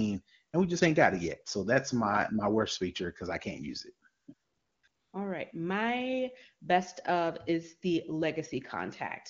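At 0.51 s, for about 20 ms just before "and we just ain't", AMR comfort noise briefly replaces the real background. After "I can't use it" it returns at 4.21 to 4.27 s, then 4.33 to 4.83 s and 4.87 to 5.13 s, switching in and out. During these pauses the phone judged the talker silent and stopped sending speech frames, and the receiver synthesised a smooth, steady hiss from a rough level and spectrum estimate. Unlike a gate or a dropout, the gaps are filled with noise rather than silence. The transitions give this away, even though the AMR-WB speech around them, at 23.85 kbit/s, is clean.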